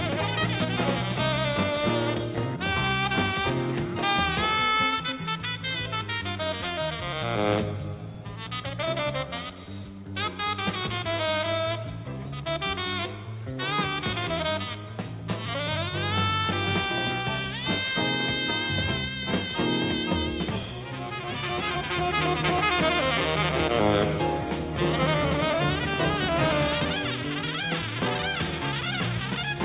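Nothing technical stands out here; the sound just runs its course without any fault to point at.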